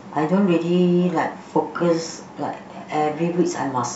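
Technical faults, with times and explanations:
No technical faults can be heard in this speech recording. There is nothing here that calls for a time or an explanation.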